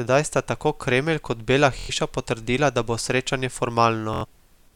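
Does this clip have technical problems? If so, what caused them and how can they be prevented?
Yes, there's Bluetooth stutter at 1.79–1.90 s and 4.14–4.25 s: late wireless packets made the receiver repeat its last slice, buzzing briefly, then skip ahead. Each skip is about 93 ms, which fits roughly four lost packets. Keep the headset close, with a clear line of sight and less 2.4 GHz traffic nearby.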